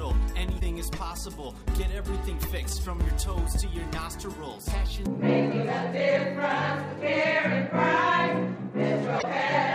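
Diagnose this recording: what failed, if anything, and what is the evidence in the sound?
Codec: damaged data in a compressed stream causes short glitches at 0.56–0.62 s and 9.18–9.24 s. The decoder loses frame sync.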